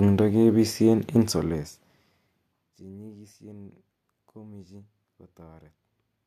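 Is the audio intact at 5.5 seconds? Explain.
Yes, the speech is intact at 5.5 seconds, with no fault at that moment.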